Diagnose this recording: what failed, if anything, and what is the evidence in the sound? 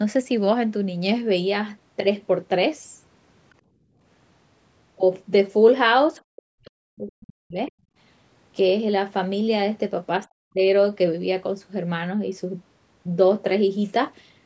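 Call processing is where this goes wrong. First, background gated by the echo canceller: the room sound drops about 16 dB at 3.62–4.01 s and about 27 dB at 7.86–7.96 s, then recovers. The canceller clamped the mic while the far end played, then released.

The talker's voice also dips hard, by something like 40 dB, at 6.29–6.79 s, 6.96–7.58 s and 10.25–10.63 s. That's likely speech suppressed in double talk: the canceller couldn't separate the local voice from the loudspeaker echo, so it ducked both.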